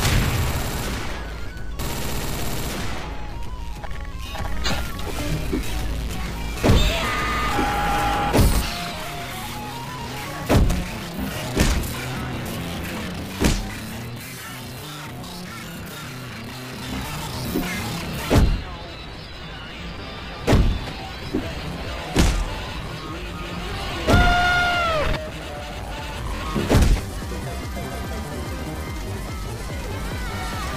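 At 26.36 to 26.42 s, a Bluetooth stutter: lost packets make the receiver replay one slice, a brief buzz seen as identical repeating waveform blocks.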